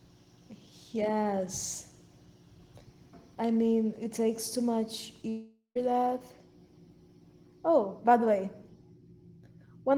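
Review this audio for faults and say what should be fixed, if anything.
From 5.29 to 5.77 s the speech turns into a fading buzz, then about 90 ms of silence, likely a long network dropout. Roughly 460 ms of speech is lost, and a spectrogram shows smeared, decaying bands ending in a blank gap. A more stable connection, a deeper jitter buffer and redundant or forward-error-corrected packets would prevent it.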